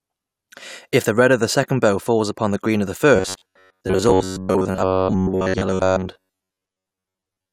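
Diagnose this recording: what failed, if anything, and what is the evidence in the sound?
Robotic sound from repeated short buffers runs from 3.16 s, just after "the green of the", to 7.52 s. The speech becomes a rigid metallic buzz locked at about 93.8 Hz that only loosely tracks the syllables. The stage is likely the driver or buffer: fresh audio arrives too seldom, so a roughly 10.7 ms block is replayed for most of that span while real audio is dropped. The buzz is that repeat rate.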